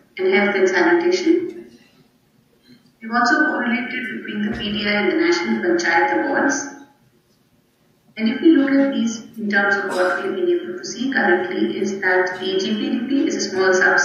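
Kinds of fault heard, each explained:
No technical faults can be heard anywhere in the recording; the signal stays continuous and steady throughout.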